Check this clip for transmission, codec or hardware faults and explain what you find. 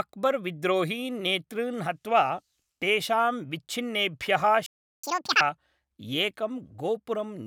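The speech stops dead and then races to make up the lost time, a playback stall followed by catch-up at higher speed.

From 4.66 to 5.04 s the output falls silent for about 0.37 s, in mid-flow. The likely cause is the player running out of buffered data or its audio thread being blocked. Unlike a dropout from lost packets, where a short gap is skipped or concealed, nothing is discarded here: the held-back audio is played out afterwards, which is what marks it as a stall.

From 5.04 to 5.41 s the player drains its backlog by resampling at double speed, so tempo and pitch rise together, by roughly ten semitones, giving a brief chipmunk-like rush before snapping back to normal. That coupled jump sets it apart from time-stretching or a clock drift. Time-stretching would keep the pitch steady, and drift would shift pitch only slightly and gradually.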